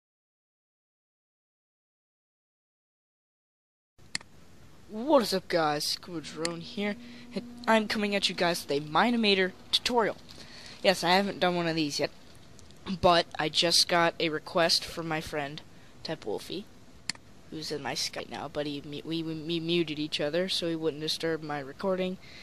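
At 18.18 s there is a brief disturbance lasting well under 20 ms, caused by damaged data in a compressed stream. A stretch of the encoded file was corrupted, so the decoder misread or rejected the affected frames, lost sync and had to find the next valid frame header before playback could continue. The result is a momentary glitch in the sound. It stems from a broken bitstream rather than a simple sample-level click or dropout in the playback path.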